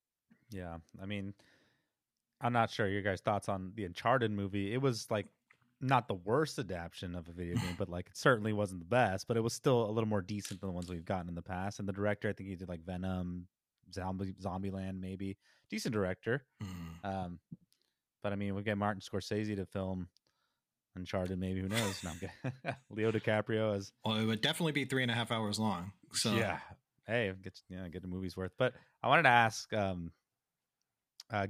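No technical faults are audible anywhere in the speech recording.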